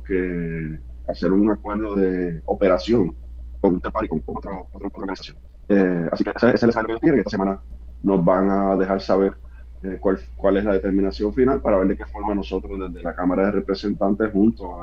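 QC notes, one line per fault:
3.53–7.49 s, time-stretched section: the pace abruptly jumps to 1.72 times normal while pitch stays unchanged, so this stretch sounds rushed. The likely cause is software squeezing the audio into a shorter length by cutting out short slices to keep pitch constant.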